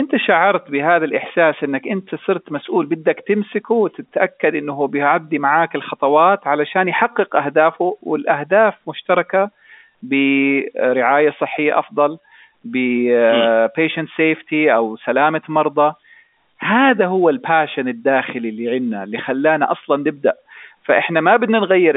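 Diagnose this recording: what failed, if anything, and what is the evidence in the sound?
Nothing has failed here: the speech comes over an ordinary G.711 telephone link, so the narrow line band of roughly 250 Hz to 3.6 kHz, with nothing above 3.7 kHz, is just how a phone line is meant to sound.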